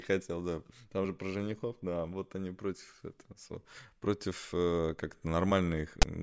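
A speech recording that ends with a harsh, loud rasp at 6.02 s, a hard-edged burst of static that starts and stops abruptly and sits lopsided rather than centred around silence. This is file tags played as audio: a block of text metadata stored in the file has been decoded as if it were sample data. Because text characters are all positive byte values, the resulting waveform is pushed to one side, giving that offset, grating buzz.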